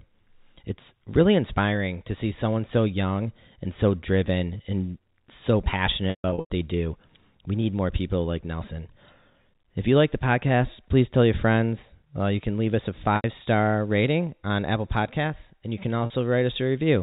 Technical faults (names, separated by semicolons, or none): packet loss with pitch repetition